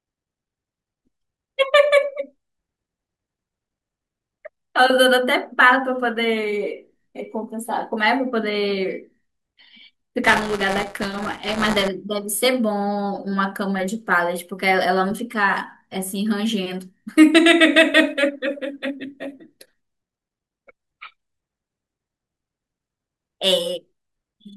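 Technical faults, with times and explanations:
10.24–11.88 s, buffer tearing: a robotic rattle at 188 Hz rides on the speech, which fits a 256-sample buffer. Writer and reader pointers cross each period, so a small slice of every buffer replays audio about 15 ms stale, bounded by hard splices.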